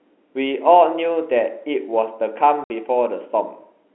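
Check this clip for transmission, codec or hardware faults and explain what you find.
One transmission fault is audible in the speech. From 2.64 to 2.70 s the audio drops into a 60 ms hole of dead silence, with hard edges at both ends. This is packet loss filled with silence: the receiver substituted silence for missing packets, and the gap fits two lost 30 ms packets. The G.711 telephone coding carrying the call keeps the band to roughly 300 Hz to 3.4 kHz.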